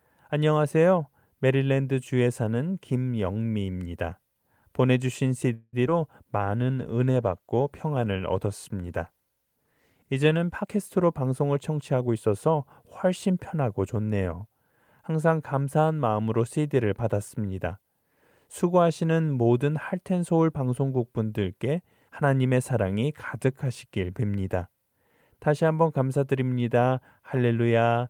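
At 5.53 s the speech stalls for about 0.21 s. The last sound is stretched into a fading buzz that ends in roughly 10 ms of silence, then the audio resumes where it stopped. This is a call audio freeze, likely from delayed packets draining the jitter buffer. No speech is lost, but about 195 ms of delay is added.

From 5.87 to 5.91 s comes a short concealed packet loss. About 20 ms of audio never arrived. The receiver bridged the hole by extending the preceding sound and blending back in, which leaves a brief smear or wobble in the speech and shifts timing by a few milliseconds.

A call bitrate drop runs from 6.40 to 11.29 s. The encoder's rate falls from 32 kbps to 18 kbps and stays at the lowest level for about 3.9 s. The coarser coding makes the speech sound rougher and more watery until the rate recovers.

Overlapping the end of that, from 10.60 to 12.55 s, a jitter buffer speed-up plays the speech at about 109% speed to shed surplus buffered audio. 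Short pitch-period slices totalling around 200 ms are cut out repeatedly, so the speech sounds hurried while its pitch stays unchanged.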